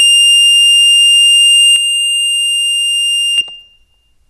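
At 1.76 s the music suddenly drops in level by about 6 dB and stays there until 3.38 s, when it jumps back up. This is one channel dropping out. The likely cause is one side of the stereo signal being lost for that stretch. Heard as a mono sum, material shared by both sides falls by half. Anything carried only on the missing side vanishes entirely. The result sounds quieter, with abrupt steps at both edges.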